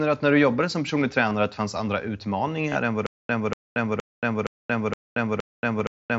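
At 1.29 s, between "du jobbade som personlig" and "att det fanns andra", concealed Bluetooth headset packet loss fills a 15 ms hole with repeated recent waveform. At 2.69–2.75 s, 45 ms is lost across 60 ms, with a 30 ms run that buzzes at full level and warbles on recovery. On the waveform it shows as copied cycles. A 7.5 ms loss at 5.79 s is nearly hidden.

From 3.06 s to the end, a stutter with silent gaps, likely a stalled stream retrying, replays a 239 ms burst every 468 ms, six times, with about 229 ms of digital silence between. It appears as identical blocks separated by flat lines and blank spectrogram columns, and the intervening audio is lost.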